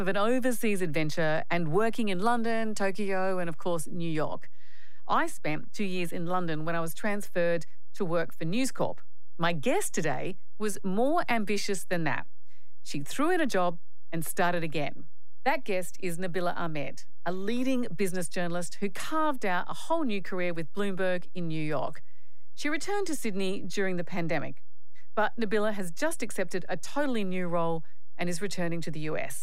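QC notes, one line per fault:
throughout: DC offset. Nothing in the speech itself changes audibly, yet the waveform rides on a constant shift of about -26 dBFS, so it never centres on zero. The sound is the same, but the positive and negative peaks sit unevenly and one side reaches full scale sooner, which takes away headroom. On a spectrum it shows as steady energy at 0 Hz, the very bottom of the range, rather than as anything a listener can pick out.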